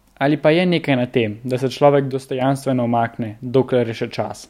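One channel drops out from 2.12 to 2.41 s: for about 0.29 s the speech falls abruptly by about 6 dB and then snaps back. The likely cause is one stereo channel briefly going silent, so the mono sum carries only half the shared signal.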